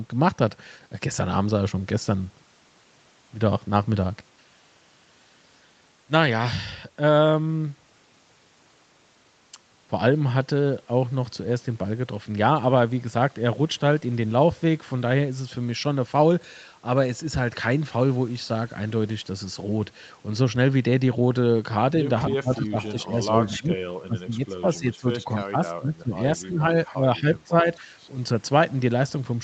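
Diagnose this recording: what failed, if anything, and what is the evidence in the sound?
Echo leak at 22.31 to 23.0 s and again at 26.43 to 26.47 s: a faint copy of the far-end speech returns 262 ms late, about 25 dB and then about 30 dB below the talker. This is likely residual echo slipping past the echo canceller in call processing.

Speech suppressed in double talk from 22.37 to 27.91 s: while both sides overlap, the near talker dips in pieces, by about 20 dB at worst and for roughly 3 s in all. The likely cause is the echo canceller attenuating both signals because it could not separate them.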